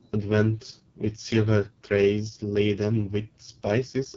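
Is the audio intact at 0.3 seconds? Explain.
No. The AMR wideband (HD Voice) codec runs through the whole clip, including 0.3 s. The coarse, raspy speech fits its lowest rate, about 6.6 kbit/s, where the pulse-driven vocal tract model loses detail, and nothing is heard above 7.2 kHz.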